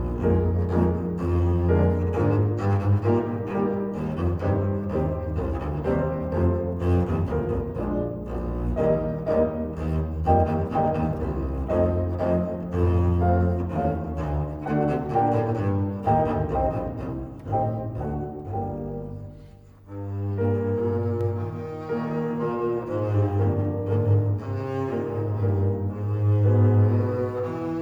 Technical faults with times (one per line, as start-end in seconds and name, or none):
21.21-27.81 doubled audio track